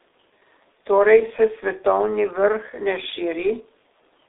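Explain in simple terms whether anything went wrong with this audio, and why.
Something did go wrong, and it lasts the whole clip. The speech has been squeezed through the G.723.1 codec, an old internet-phone format that packs speech into very little data. It keeps only a narrow phone-line band, roughly 300 Hz to 3.7 kHz, and nothing above about 3.8 kHz survives. So the speech sounds muffled and boxy. The damage here is heavy, so the speech also sounds hoarse, and sharp consonants blur together.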